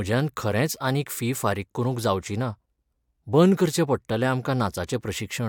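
Speech in the clip comes through with no audible technical fault at any point in the signal.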